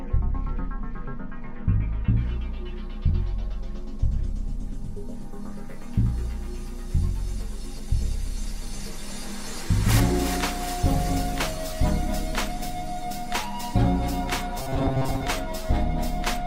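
From 14.58 to 15.28 s the audio collapses into robotic sound from repeated short buffers, a rigid metallic buzz pinned at 133 Hz, which points to a segment of roughly 7.5 ms looping over most of that stretch. The likely cause is audio arriving too slowly, so playback keeps recycling the last chunk while the real material gets skipped.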